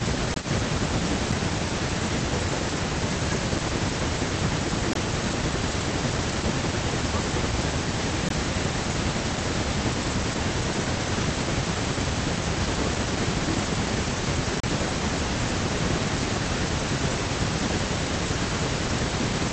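Speech over a call link, with the top end stopping around 8 kHz as the call codec band-limits it, and it has a few problems stacked up. A delayed copy of the voice trails it the whole way through, about 305 ms behind and roughly 10 dB down. That's an echo leak, likely a loudspeaker-side echo canceller letting its mic pickup back into the call. The talker also dips by up to about 5 dB in patches across 0 to 8.1 s, 9.35 to 13.25 s and 14.18 to 19.21 s, adding up to around 2 s, 1 s and under a second respectively. That pattern fits speech suppressed in double talk, where the canceller ducks everything while both ends are talking. On top of that there are blocks of digital silence, hard dropouts to silence. They land at 0.34 s and 4.93 s, each about 21 ms, which fits a 1024-sample buffer not being filled in time. There's a shorter one at 8.29 s and a longer 34 ms hole at 14.60 s.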